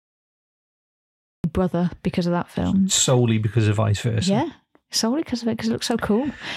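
Cut-off start, 0.0 to 1.44 s: capture began late, so the opening is digital silence and the speech enters abruptly at 1.44 s, mid-sound, with no natural attack or fade, just before "brother because of that". Whatever preceded it is missing.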